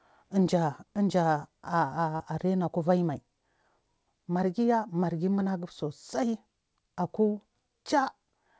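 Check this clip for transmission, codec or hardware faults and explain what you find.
One transmission fault shows up, a short concealed packet loss at 2.16 to 2.21 s. About 40 ms of the speech arrived too late for the decoder. The receiver covered roughly 33 ms of it by extending the preceding sound, then faded back into real audio. It is heard as a brief smear or wobble. The call path runs through a codec with nothing above 8 kHz, which fits wideband G.722.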